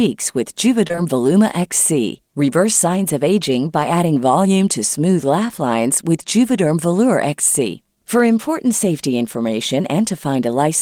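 Three back-to-back short concealed packet losses, 0.87–0.92, 0.92–0.95 and 0.95–0.99 s, each dropping about 20 ms the decoder extrapolated, leaving one brief smeared wobble.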